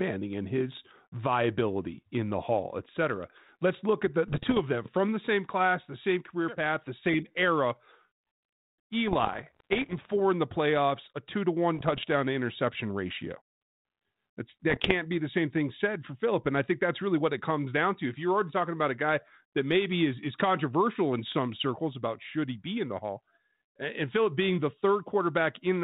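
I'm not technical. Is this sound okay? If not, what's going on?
No. At 4.28 to 4.60, 9.08 to 9.94, 11.75 to 12.04 and 14.70 to 14.92 seconds the speech breaks into pops and rough, crackly bursts that jump in loudness. These are bit errors on an ADPCM link: scrambled data briefly throws the phone-style decoder off track until it recovers.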